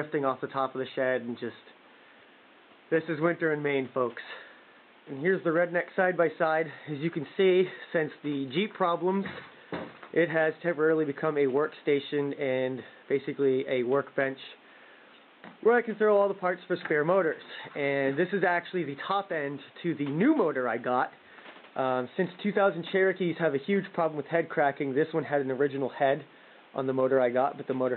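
No technical faults can be heard anywhere in this clip.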